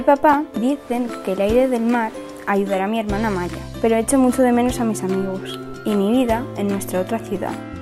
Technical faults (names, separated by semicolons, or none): lost LE Audio frames